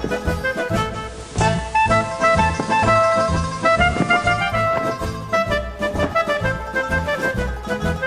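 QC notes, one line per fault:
0.85–4.66 s, digital radio blending to analogue: the receiver lost its digital stream and cross-faded over 0.41 s to the FM broadcast of the same station, then blended back to digital at 4.66 s. For that stretch the level shifts by about 2 dB, and a bed of hiss rises to roughly 25 dB under the sound.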